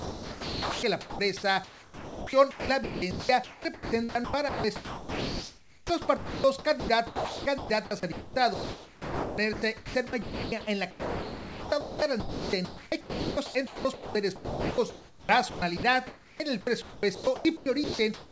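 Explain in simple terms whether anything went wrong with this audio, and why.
Yes, sound chopped by the voice detector, likely: during 0–1.19, 1.64–6.44, 6.80–7.70, 8.12–10.52, 10.91–16.40 and 16.82–18.31 s, quieter parts are swapped for a steady synthetic hiss. Dropped packets would cause clicks or dead silence instead.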